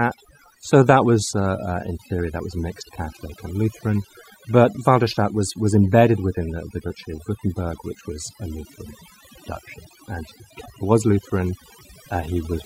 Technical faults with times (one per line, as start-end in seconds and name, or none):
0.00-12.66 overdone noise removal